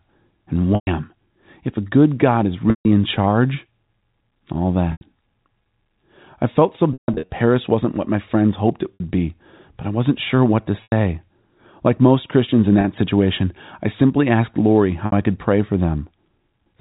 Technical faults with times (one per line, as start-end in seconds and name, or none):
0.75-0.87 packet loss with pitch repetition
2.70-2.85 packet loss with pitch repetition
4.92-5.01 packet loss with pitch repetition
6.93-7.29 packet loss with pitch repetition
8.94-9.00 packet loss with pitch repetition
10.83-10.92 packet loss with pitch repetition
12.81-12.84 packet loss with pitch repetition
15.06-15.12 packet loss with pitch repetition